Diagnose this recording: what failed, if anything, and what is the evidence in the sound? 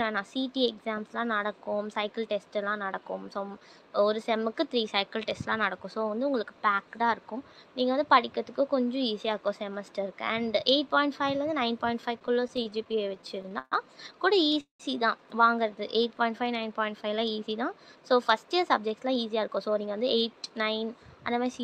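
Repeated stalls (stutter) at the network and jitter-buffer stage run from 12.19 to 13.74 s. The sound catches about 20 times, each catch held on a prolonged continuation of the preceding sound, the longest about 130 ms and together about 321 ms, roughly a fifth of that span. Packets kept arriving behind the playout clock, so the buffer drained repeatedly and the receiver bridged each gap. Unlike a single freeze, this is a chain of short hitches, and nothing is lost.

A call audio freeze follows from 14.61 to 14.82 s. The last sound is stretched into a fading tail that drops to silence for about 130 ms, and then the audio resumes exactly where it left off. The likely cause is a network hold-up that emptied the jitter buffer, adding about 190 ms of delay. What separates it from the stutter is one longer gap rather than many brief ones. What separates it from a dropout is that no material is skipped.

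Jitter buffer slow-down appears from 15.82 to 16.15 s. The sound plays at about 89% speed with its pitch unchanged, drawn out by about 45 ms. With the buffer running low, the receiver rebuilt its reserve by repeating single pitch periods or slices of pauses. Unchanged pitch rules out a tape-style or clock-rate slowdown, and the absence of any gap or held tail distinguishes it from a stall.

Jitter buffer speed-up covers 17.96 to 20.01 s. The sound is hurried to about 112% speed, again at unchanged pitch, with roughly 0.3 s trimmed in total. The buffer had overfilled, likely from late packets arriving in a bunch, and the receiver cut short pitch-period pieces to shed the excess delay. Because the pitch stays put, this is time compression in the buffer rather than a sample-rate mismatch, which would raise the pitch too.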